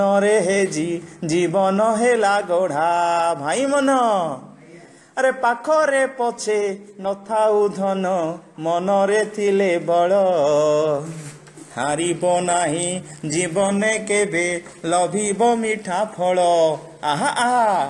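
No technical faults are audible anywhere in the recording.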